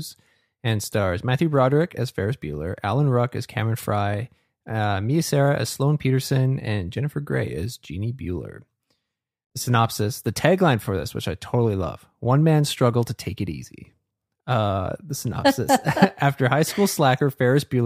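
No technical faults occur at any point in the recording, so there is nothing to describe in time order.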